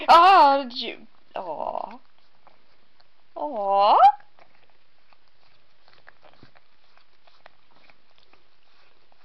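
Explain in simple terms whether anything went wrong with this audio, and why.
Nothing went wrong with this audio that a listener can pick out. At no point does the sound misbehave, so there is nothing here that needs explaining or fixing.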